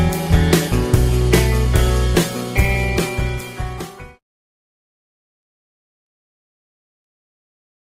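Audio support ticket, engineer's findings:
Call bitrate drop, 2.18–4.77 s. Audio turns rough and watery. Encoder starved after bandwidth estimate fell, about 96 to 20 kbps. Coarser coding, treble lost. Recovers near 4.77 s.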